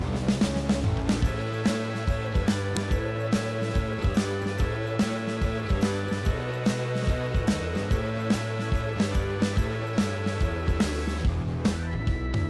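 At 2.77 s there's a sharp, loud click, a file header played as audio. What happened is that a second WAV piece was joined onto the first without its header being stripped, so those few dozen bytes of file metadata got read as sample values. They're nonsense as a waveform, so you get a brief snap that has nothing to do with the surrounding sound, sitting right at the seam between the two pieces.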